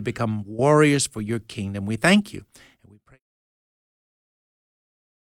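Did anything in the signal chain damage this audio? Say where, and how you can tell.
No, nothing damaged this audio.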